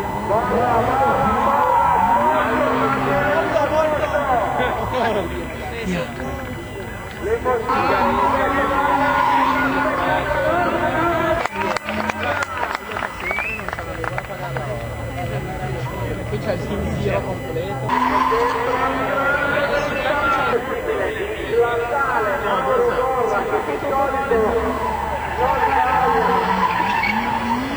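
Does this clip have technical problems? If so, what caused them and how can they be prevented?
Yes. USB whine runs throughout: a fixed 1 kHz tone, strongest at 2 kHz, about 20 dB below the sound. USB's 1 ms frame currents leak in through power or ground. Prevent it with an isolated or powered hub, or a ground-loop isolator.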